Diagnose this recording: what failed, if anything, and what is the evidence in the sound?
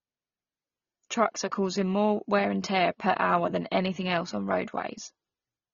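The codec stage failed: this speech was likely encoded at a low bitrate first and later saved again at a high bitrate, so the low-bitrate audio was kept at a high bitrate without getting any detail back. Throughout the clip there is nothing above 6.9 kHz, a hard ceiling that fits a first pass at around 24 kbit/s. The coding artefacts of that pass remain. The high-bitrate second encode only preserves the damage; it cannot restore what was discarded.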